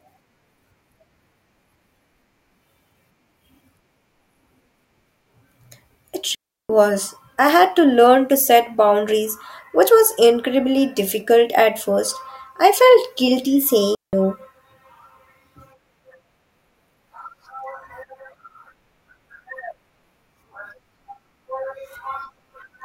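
Digital wireless dropouts occur at 6.35 s and 13.95 s, where the speech simply stops. The first hole lasts about 0.35 s, to 6.70 s; the second is shorter, about 0.18 s, ending at 14.13 s. In each, the radio link lost too much data for the receiver to rebuild the signal, so it muted with a very quick fade. The result is a clean gap of near silence, with no crackle or noise burst on either side.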